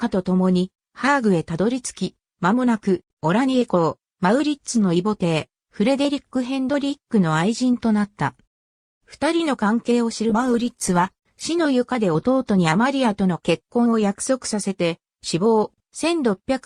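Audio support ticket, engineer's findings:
Call bitrate drop, 10.3 to 11.49 s: audio goes coarse and grainy for about a second, then snaps back. Probable component is the encoder following a collapsed bandwidth estimate. The sound points to roughly 96 kbps falling to about 19 kbps.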